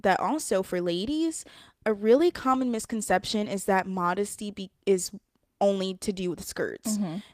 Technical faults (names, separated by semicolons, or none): call bitrate drop